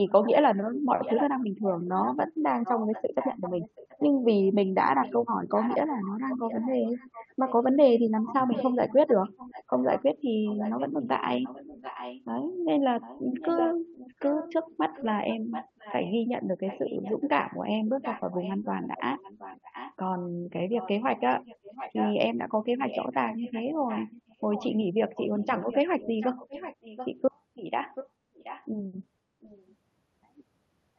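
From 0.09 s to 29.75 s the speech is trailed by a delayed copy of itself, arriving about 0.73 s after the original and sitting roughly 10 dB below it, so a quieter repeat shadows the speech. This is an echo leak, likely from a far end playing the call on a loudspeaker, where the echo canceller failed to remove what its microphone picked up and sent that residue back down the line.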